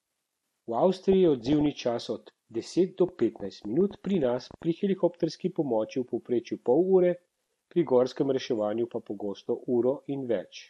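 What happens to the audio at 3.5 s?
A ticking of sharp, similar clicks runs over the speech from 3.09 to 5.25 s, starting after "čas od deset do" and ending before "pomoči v povprečju pol". There are roughly fifteen, about six per second at an uneven pace, peaking about as loud as the speech. This train of clicks is likely interference or a faulty connection injecting repeated pulses.

Underneath, the speech sounds dull, with a gurgling, granular edge. This is likely MP2 compression at a low rate, around 80 kbps. With too few bits, MPEG Layer II switches off upper sub-bands and coarsely quantises the bands that remain, so the highs flicker and the sound turns grainy.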